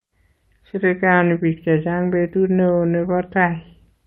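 Throughout the speech, clock drift between sender and receiver leaves the sender's clock about 2% slow, so the jitter buffer keeps draining rather than dropping isolated packets. From 0.04 to 3.58 s, repeated timing corrections stretch the speech to 98% speed, adding about 70 ms in small, unevenly spaced repeats heard, if at all, as slight hiccups, not a steady slowdown.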